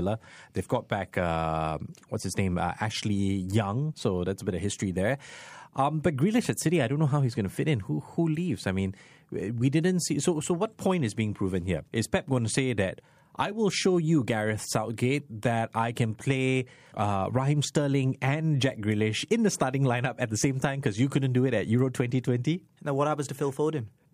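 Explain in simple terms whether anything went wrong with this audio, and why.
Nothing to report: no technical faults can be heard anywhere in the speech recording.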